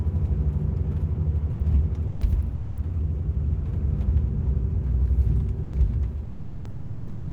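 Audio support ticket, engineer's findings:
Sound dropped by the voice detector: gaps at 1.51–1.59, 2.07–2.21, 2.55–2.77, 5.63–5.73 and 6.25–7.31 s, the last about 1.06 s. Likely Opus DTX gating active sound as background, comfort noise filling in. Spectrogram: full-band content replaced by a flat low-level noise floor. Waveform: abrupt envelope collapse to a thin band.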